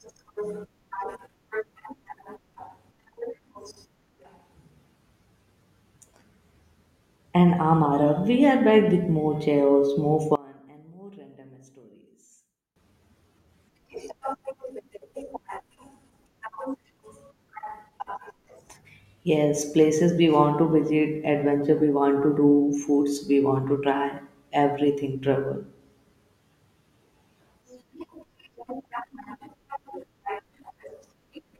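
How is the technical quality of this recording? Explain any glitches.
The recording has one clear glitch. From 10.36 to 12.76 s, just after "with more chaos more", the speech drops by about 26 dB and sounds faint. The likely cause is one channel inverted: with one side's polarity reversed, the shared centre content cancels when the channels are summed to mono, leaving only their faint difference.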